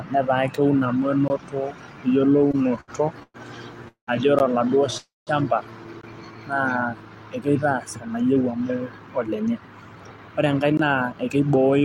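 At 1.28–1.30 s a block of digital silence cuts in: about 20 ms of audio drops out with no fade. The same flat line appears at 4.39 s (about 14 ms), 6.01–6.03 s and 10.77–10.79 s. On a waveform each is a dead-flat segment with a vertical step at each edge. On a spectrogram each is a blank column bracketed by thin broadband click lines, heard as a tick or tiny hole.

From 2.33 to 3.36 s the speech shows repeated stalls (stutter). Eleven times the receiver ran short of packets and stretched the last sound instead. It filled 289 ms in all, the longest gap 114 ms, with nothing lost. The speech drags and catches. The spectrogram shows smeared, repeated frames between normal ones.

Two call audio freezes follow, at 3.88–4.09 s and 4.98–5.29 s. Each is a buzzy continuation of the last sound that fades out, with about 120 ms and 180 ms of near-silence respectively. They push the audio 192 ms and then 292 ms later, likely because packets were held up in transit. 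On a spectrogram each is a frozen, fading harmonic pattern trailing into an empty band.

From 8.07 to 11.58 s a jitter buffer speed-up plays the speech at about 110% speed at unchanged pitch, removing roughly 0.3 s overall. It sounds hurried. Harmonics stay level on the spectrogram while syllables compress, and the waveform shows slightly shortened pitch-period trains.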